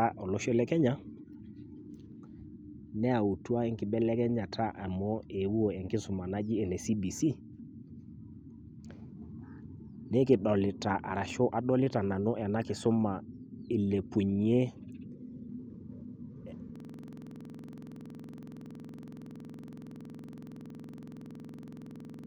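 At 16.76 s a system hang loop sets in: the computer stalled while the sound hardware kept replaying one ring buffer. A 46.44 ms slice of the speech repeats about 21.5 times a second until the end, a rapid rattling stutter, which fits a 2048-sample buffer.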